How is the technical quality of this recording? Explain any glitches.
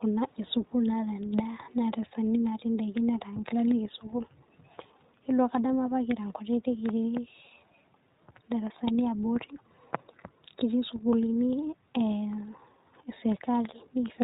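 The quality is limited by one audible fault present throughout. The iLBC codec runs the whole clip. It codes each 20 ms frame independently, consistent with 15.2 kbps. Nothing above 4 kHz survives. Speech sounds muffled, rough and synthetic.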